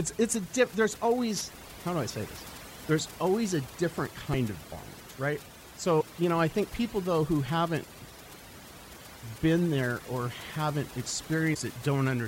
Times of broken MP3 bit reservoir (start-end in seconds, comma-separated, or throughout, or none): 4.32-4.35, 11.53-11.56